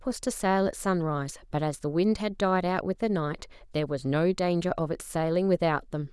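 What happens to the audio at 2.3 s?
Nothing goes wrong at 2.3 s; the speech carries on intact through that moment.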